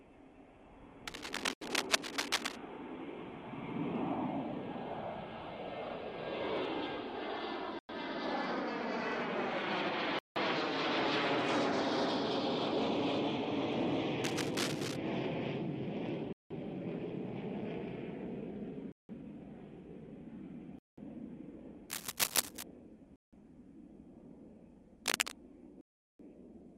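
From 1.07 to 2.56 s, a rough, uneven rustle sits over the audio at about the same level as the sound itself. This is cable scratch noise, from a likely worn lead or connector being moved. It comes in dense, irregular bursts, unlike steady hiss or isolated clicks. It returns, a little quieter, at 14.24 to 14.96 s. It is heard again at 21.90 to 22.63 s, and at 25.05 to 25.32 s slightly louder than the sound.

At 1.53, 7.79, 10.19, 16.33, 18.92, 20.79, 23.16 and 25.81 s, the playback drops to full silence. It then resumes where it stopped or slightly later. The gaps run from 80 ms to 380 ms, with the last the longest. This is a Bluetooth stall, likely an empty headphone buffer waiting for resent packets.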